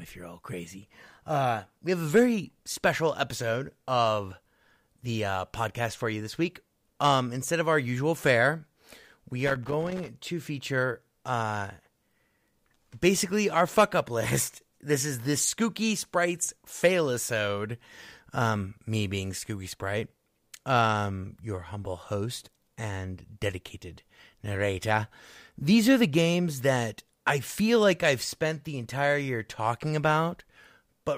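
A speech recording with a burst of loose connector crackle from about 9.47 s to 10.09 s, ending just before "to feature uh". For roughly 0.6 s the signal is chopped into an irregular scratchy rattle, as a worn or dirty contact in the cable or jack makes and breaks while it moves. The spacing is ragged, with no steady repeating click like a buffer underrun, and it comes as one short burst, not a constant surface crackle.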